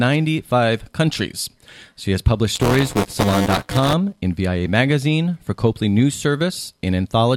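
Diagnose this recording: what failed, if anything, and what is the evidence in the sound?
Buffer tearing at the driver/buffer stage, from 2.55 to 3.93 s: a steady robotic buzz at 200 Hz rides on the speech. A small slice of each 5 ms period replays audio from roughly 15 ms earlier. Unlike dropouts, nothing goes silent.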